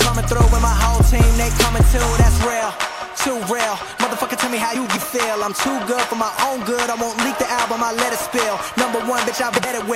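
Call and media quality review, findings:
Frames out of order, 4.75–4.97 s and 9.53–9.65 s: adjacent runs swapped (about 104 ms and 52 ms each, fitting four- and two-frame runs), producing garbled flutter. Likely jitter-buffer reordering.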